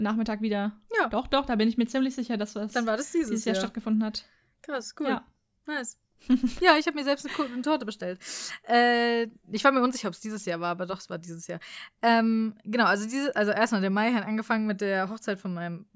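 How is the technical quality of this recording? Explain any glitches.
Nothing in this speech recording stood out as a technical problem on listening, so there are no glitches to explain.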